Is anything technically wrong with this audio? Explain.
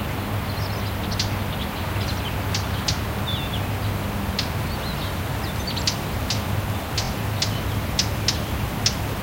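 Yes. From 7.04 to 7.08 s the everyday sound stutters as one fragment of about 23 ms plays three times in a row. These are repeated frames: the decoder was fed the same compressed chunk twice more, adding about 46 ms.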